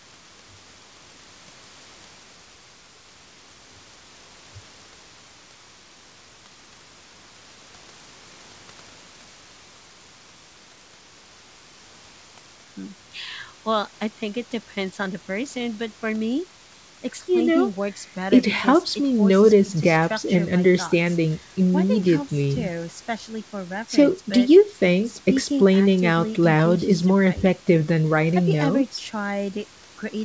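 No technical fault can be heard in this speech recording. It carries the band limit of a WebRTC call path, with nothing above 8 kHz, which fits the G.722 codec, and the room noise sits about 35 dB below the speech.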